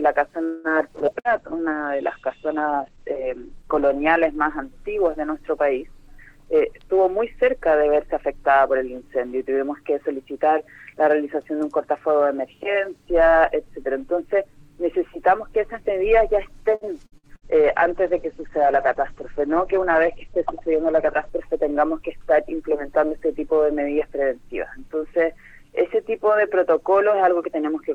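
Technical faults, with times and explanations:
0.43–0.67 s, call audio freeze: the sound stalls and the last instant is drawn out as a fading sound for about 0.21 s, then picks up exactly where it stopped with nothing lost. Most likely the packets were held up in transit and the jitter buffer ran dry, so the receiver stretched what it last had to bridge the wait, pushing everything after it later by the same amount.
0.99–6.66 s and 17.41–21.41 s, call bitrate drop: the audio turns coarse and muffled, losing its top end, most severely for about 1.9 s in the first stretch and about 3.9 s in the second. The call's bandwidth estimate fell and the encoder was held to 10 kbps instead of 48 kbps, so it coded more roughly and cut the audio band from 20 kHz down to 8 kHz until the rate recovered.
1.06–1.10 s, skip ahead: playback lurches forward with barely any gap, and roughly 70 ms of sound simply vanishes, the two sides butted together. 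Later audio was already queued when a stretch was discarded, either lost on the way or dropped by an overfull jitter buffer, so the receiver jumped ahead and shed some of its built-up delay rather than pausing.
1.19–1.28 s, burst of packet loss: the last sound is briefly held and fades into the gap, then the audio resumes further on with about 60 ms gone. Several consecutive packets were lost or arrived too late to play, so the receiver carried the last sound forward for about 56 ms, lowering it as the hole went on, before continuing from audio beyond the missing part.
1.29–1.77 s, jitter buffer slow-down: the sound drags, running at about 90% speed with unchanged pitch and drawn-out sounds, adding about 55 ms in total. The jitter buffer was low, so the receiver repeated single pitch periods and small pieces of pauses over and over to rebuild its reserve, stretching the timing without shifting the pitch.
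6.61–8.49 s, jitter buffer speed-up: the audio hurries along at about 111% speed with the pitch unchanged, roughly 0.2 s cut out over the span. The jitter buffer was holding more than its target, so to bring the delay down the receiver repeatedly removed short slices of one or a few pitch periods, compressing the timing.
16.75–17.45 s, repeated packet loss (robotic sound): the sound goes choppy, with four holes close together totalling about 180 ms lost, the longest about 60 ms, and about a third of the span patched over. Packets kept going missing or late, each gap was filled by extending the last sound, and the next gap arrived before the audio could settle.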